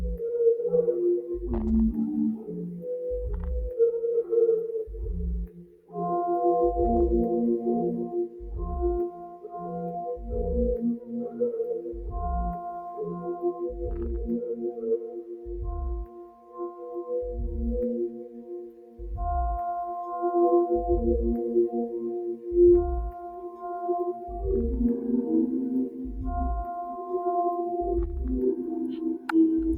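All the way through, a noise suppressor built for speech is running on sound it wasn't made for. It treats sustained material as noise, so the level swings by around 15 dB and the sound pumps, flutters or thins out.

There are spots where the noise suppressor cuts sound harder: at 5.47, 8.26, 10.99, 12.88 (the longest, to 17.12), 18.08, 22.35 and 28.58 s. Held parts sink by about 8 to 13 dB while sharp onsets slip through.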